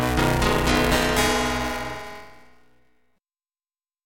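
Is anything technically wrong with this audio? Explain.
Yes. Buffer tearing runs through the whole clip. The writing program and the playback hardware have slipped, so they cross inside every period, and a bit under half of each buffer replays audio from around 20 ms earlier. The hard joins produce a rattling, robotic buzz near 188 Hz whenever there is signal, which fits a 256-sample buffer.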